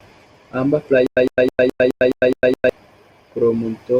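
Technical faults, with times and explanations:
1.07 to 2.69 s, stutter with silent gaps: the speech locks onto a fragment about 106 ms long and repeats it 7 times, each repeat followed by roughly 104 ms of dead digital silence, giving an even stutter every 210 ms. The likely cause is a stalled player or stream that replayed its last buffered fragment at each retry and then ran dry, so the speech belonging to that stretch never plays.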